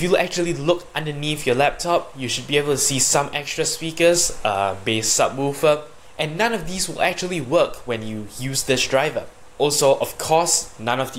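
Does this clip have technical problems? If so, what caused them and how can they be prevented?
No, there are no technical problems to address here.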